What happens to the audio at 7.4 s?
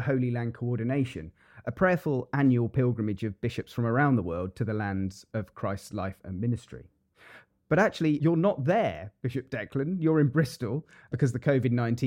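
Nothing goes wrong at 7.4 s; the speech carries on intact through that moment with no dropout, click, distortion or other fault.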